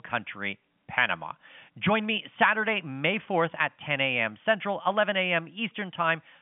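Nothing stood out on listening to this telephone-band speech.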